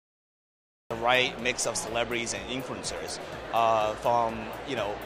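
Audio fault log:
0.00–0.91 s, cut-off start: capture began late, so the audio opens on digital silence until 0.91 s, where sound enters already in progress. There is no natural attack or fade-in, and it jumps straight in, as if sliced mid-event.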